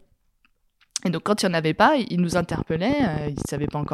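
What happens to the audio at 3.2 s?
Something, likely nearby electrical interference or a faulty connection, is injecting pulses: 3.2 s falls inside a train of clicks running from 2.33 to 3.87 s. Around 30 similar clicks arrive unevenly, about 17.6 per second, ticking roughly 10 dB above the speech.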